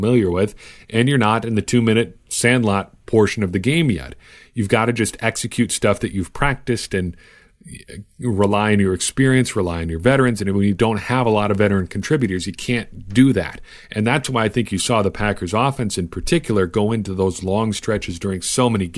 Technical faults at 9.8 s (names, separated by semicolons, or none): none